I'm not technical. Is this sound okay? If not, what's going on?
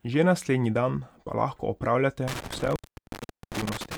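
No, not quite. Right after "dan pa lahko," at about 2.28 s, the speech starts dropping out, and that trouble lasts until the clip ends. This is an intermittent contact: a loose cable or plug briefly loses its connection, so the sound cuts off with a little crackle at each edge. One dropout lasts about 0.76 s, and during it you hear only a faint hiss instead of the speech.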